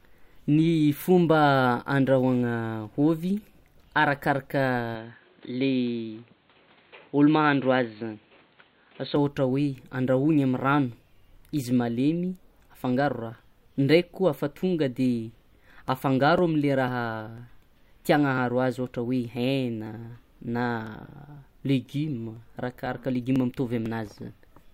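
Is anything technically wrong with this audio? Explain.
Yes. From 4.95 s to 9.16 s the speech turns dull and boxy, with nothing above 4.4 kHz. There is no gap at either switch and the level holds steady. A faint new noise floor sits roughly 40 dB down. The likely cause is an input switched to a poorer device, one passing a narrower band.

From 15.38 s to 24.36 s there are periodic USB or driver dropouts. Ticks fall every 0.50 s. Each one skips about a millisecond of audio. Something blocks the audio path at that fixed interval. The ticks are heard only while there is sound.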